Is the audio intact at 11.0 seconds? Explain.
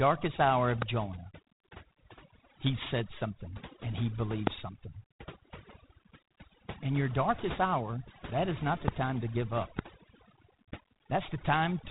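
No. At 11.0 seconds the speech is carrying two faults, and both run through the whole clip rather than starting there.

First, overdone noise removal. The reducer was pushed too hard, so any frequency band sitting close to its idea of the noise gets pulled way down or dropped entirely. Quieter parts of the voice get caught too, which leaves the gaps sounding almost dead apart from little twinkling specks.

Second, G.726 ADPCM. This codec sends each sample as a few bits describing how far it strays from a running prediction, and the damage here is plainly audible. The harsh, rasping hiss that rises and falls with the speech fits the 24 kbit/s mode. Nothing gets through above 3.8 kHz, so the top end is gone and the voice sounds boxed into the telephone band.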